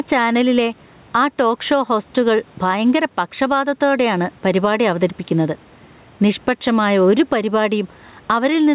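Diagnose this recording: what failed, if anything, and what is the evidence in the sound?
Gain pumping throughout: the gain swings roughly 10 dB, ducking under loud syllables, likely from input gain set too hot feeding a fast limiter.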